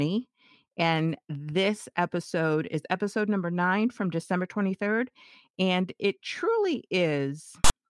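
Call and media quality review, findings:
File tags played as audio, 7.64 to 7.70 s, near clip end. Symptom: sudden loud rasp, hard on/off edges, about 60 ms, offset to one side of zero. Probable component: file reader/demuxer. Mechanism: text tag block decoded as sample data; character bytes form a biased, buzzy waveform instead of speech.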